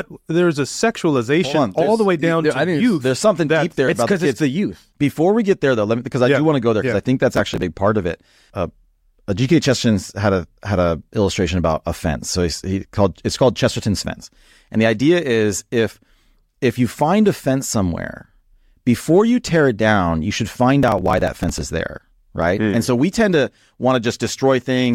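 Speech clip with processor overload crackle at 7.34–7.62 s after "think that's" and 20.83–21.61 s after "down you should find": rapid skipped buffers, roughly 5 ms each, tearing gritty gaps.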